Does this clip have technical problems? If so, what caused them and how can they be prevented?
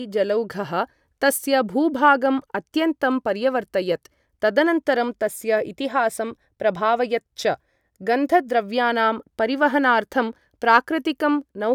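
No, there are no technical problems in this clip. Nothing here calls for prevention.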